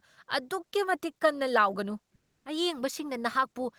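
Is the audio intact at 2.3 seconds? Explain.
No. From 2.15 to 2.45 s, the sender likely stopped transmitting during a pause, as Opus discontinuous transmission does, so the receiver filled the 300 ms with comfort noise in place of the background: a steady, featureless hiss about 15 dB quieter than the real room sound.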